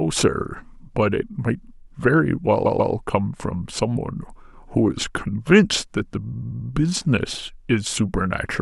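At 2.65 to 2.93 s, repeated frames make the speech stutter as a 139 ms block replays twice. At 6.32 to 6.69 s, a 93 ms block replays four times. Duplicated compressed frames cause both stutters.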